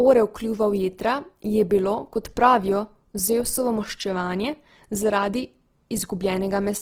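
Opus compression runs throughout the speech, likely from encoding in the music (CELT) mode at a low rate fitting about 16 kbps. Band energies hold, but starved bands get filled with folded or noise content, so the speech sounds plainly rough, grainy and noisy.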